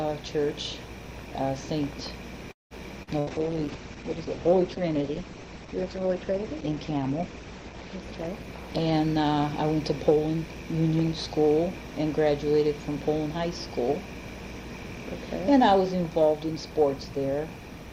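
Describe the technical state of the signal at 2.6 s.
A call audio freeze runs from 2.51 to 2.74 s: the last sound smears into a fading buzz or hiss, then silence, likely from late packets draining the jitter buffer; playback resumes about 193 ms behind, with nothing lost.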